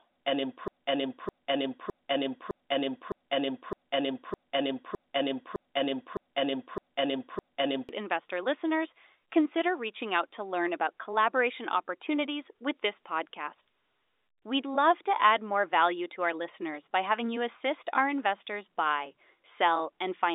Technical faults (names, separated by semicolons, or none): broken-record loop